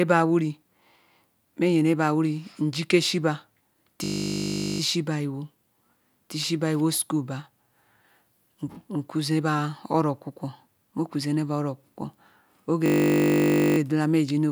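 At 4.04 s the speech locks into a system hang loop until 4.8 s, and again from 12.86 to 13.78 s. The system froze while the hardware replayed one 20 ms buffer. Each stall is a steady 50 Hz buzz. Little or no speech is lost.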